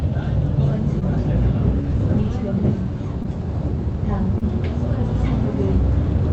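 Short concealed packet loss at 0.99–1.03 s, 3.23–3.26 s and 4.38–4.43 s in this everyday-sound recording: each gap, consistent with a lost 20 ms packet, was patched by extending the preceding sound, leaving a brief smear or wobble.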